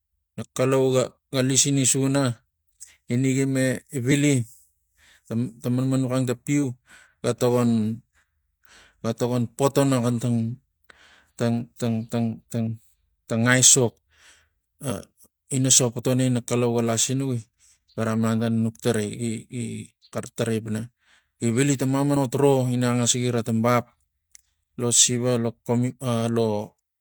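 A speech recording with damaged data in the compressed stream. Brief corrupted bursts occur at 4.08–4.13 s, 6.59–6.64 s, 14.87–14.92 s and 22.12–22.17 s. Each lasts about 50 ms. The decoder misreads bad frames there, losing sync before recovering.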